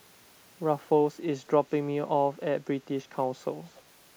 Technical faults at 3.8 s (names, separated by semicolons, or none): echo leak